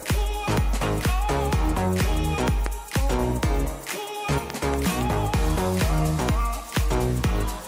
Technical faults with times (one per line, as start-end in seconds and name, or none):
2.66-2.68 loud pop
4.50-4.76 loud pop
6.77-6.79 loud pop